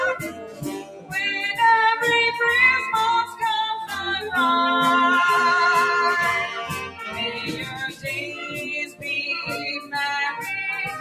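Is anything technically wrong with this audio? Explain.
Yes. A noise suppressor applied to music or sounds runs throughout: a speech-tuned suppressor treats sustained tones and tails as noise, so levels pump by about 10 dB.

Sound cut by the noise suppressor occurs at 0.15–1.14 s, 3.26–3.42 s, 6.73–8.06 s, 8.27–8.61 s and 8.85–9.06 s. Steady passages are pushed down by about 13, 7, 11, 7 and 15 dB, thinning out.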